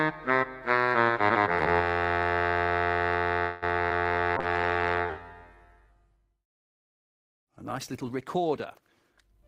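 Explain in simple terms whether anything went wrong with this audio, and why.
Yes, three problems occur close together. From 3.41 to 3.64 s the sound stalls into a fading fill for about 0.2 s, then resumes where it stopped. This is likely a call audio freeze from delayed packets.

At 3.88–3.92 s, short concealed packet loss leaves a brief smear where about 20 ms of audio went missing and was patched over.

From 4.38 s to the end, a call bitrate drop makes the sound rougher and duller, with high frequencies cut off above 12 kHz.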